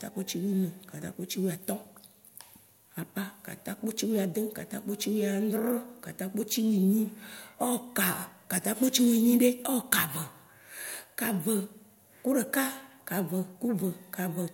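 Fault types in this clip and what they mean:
No technical faults can be heard in this speech recording. There is nothing to list for it.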